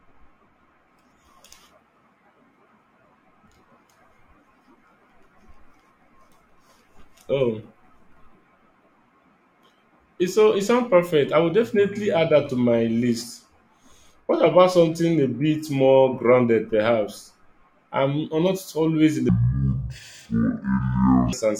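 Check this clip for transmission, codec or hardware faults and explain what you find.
One fault stands out: a stretch of stereo read as mono near the end of the speech.

From 19.29 to 21.33 s, right after "always in", interleaved left and right samples are read as a single channel, so the speech plays at 0.5x speed and 12 semitones low. A faint mirrored copy in the upper spectrum sets it apart from a plain slowdown.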